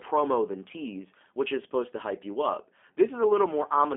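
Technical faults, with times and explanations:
Throughout: G.729 codec. The speech is rebuilt from a vocal tract filter, a pitch predictor and a few pulses per frame rather than from the waveform itself, so it comes out plainly rough and slightly synthetic, which fits 8 kbit/s G.729A. A spectrogram shows a hard ceiling with nothing above 3.6 kHz and thin energy below 250 Hz, matching a telephone line band, and harmonics look smeared and blurred.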